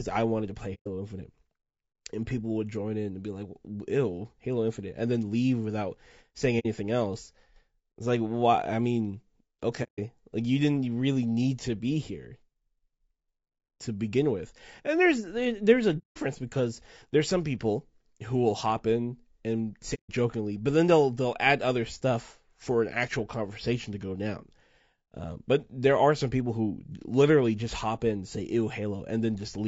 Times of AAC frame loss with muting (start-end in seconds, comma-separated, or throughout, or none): 0.74-0.88, 6.59-6.66, 9.83-9.99, 15.98-16.18, 19.94-20.10